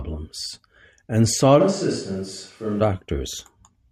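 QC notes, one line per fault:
1.62–2.79 s, switch to a distant microphone: just after "and sought", the close microphone's feed likely dropped out, leaving only a pickup much further from the mouth. With more room than direct sound reaching it, the speech turns suddenly hollow and roomy, loses low-end body, and sits about 5 dB quieter. Background noise rises to roughly 35 dB below the speech. The sudden change at both ends marks a source switch rather than movement.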